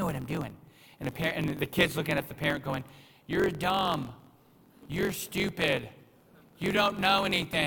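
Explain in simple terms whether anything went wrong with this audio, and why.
Something did go wrong, and it lasts through the whole recording. The fault is a block size mismatch, truncated type. One step in the audio chain hands over chunks of sound that are too long for the next step. The extra end of each chunk is cut off and lost. This happens about 46 times a second, so a low buzz runs under the speech. The chunk size fits 1024-sample blocks. Because pieces go missing, the speech plays about 1.07 times too fast, but the character of the voice stays the same.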